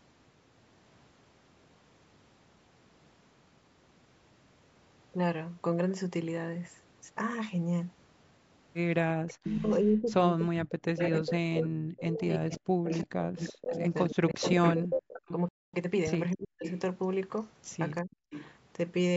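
A speech recording with call-path faults. An echo leak appears from 9.28 to 9.76 s, from 11.01 to 15.33 s, and from 16.65 to 18.54 s. A copy of the voice trails it by 343 ms. It sits about 20 dB, 5 dB and 15 dB below the speech in those three stretches. The loudest is almost as strong as the voice. The likely cause is a loudspeaker on one side whose echo canceller let its own pickup get back into the call. Speech is also suppressed in double talk. From 9.37 to 15.33 s the voice dips and breaks up for about 4 s in total, with drops of up to about 40 dB. Shorter dips follow from 16.34 to 16.66 s, and from 18.02 to 18.13 s at about 25 dB. The echo canceller likely could not tell this talker from the overlapping loudspeaker sound, so it turned both down. A playback stall silences the audio from 15.49 to 15.74 s, a gap of 247 ms. The player likely ran short of data or was blocked. Time-compressed catch-up follows from 15.74 to 16.22 s. 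The player trims its backlog by cutting and cross-fading small pieces. Speech runs 1.5 times fast at normal pitch.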